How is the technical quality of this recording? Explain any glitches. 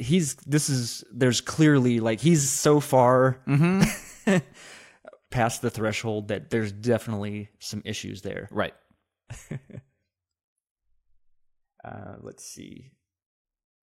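Nothing here calls for an explanation, as there are no glitches to point to anywhere in the recording.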